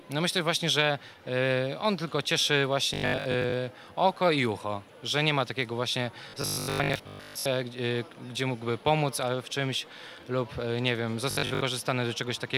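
Three stretches of the audio turn into a rigid, metallic buzz at 50 Hz: 2.94 to 3.54 s, 6.30 to 7.46 s and 11.31 to 11.61 s. This robotic sound from repeated short buffers is likely caused by audio arriving too seldom, with the last 20 ms replayed for most of each stretch while the real audio is skipped. Unlike a constant hum, the buzz appears only in these stretches and roughly follows the underlying sound.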